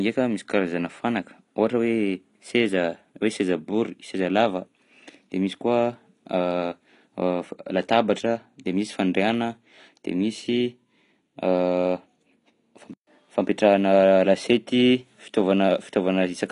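Throughout the speech, nothing reaches above 10.6 kHz. The sound is dull and smeared, with a warbling, fizzy texture. This is likely AAC compression at a low bitrate, around 32 kbps. The encoder trims the top band and quantises the rest coarsely.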